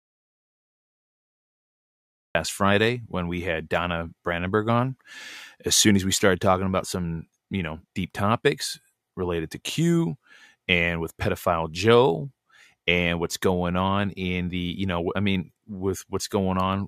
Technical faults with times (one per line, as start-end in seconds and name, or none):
0.00-2.35 audio dropout to silence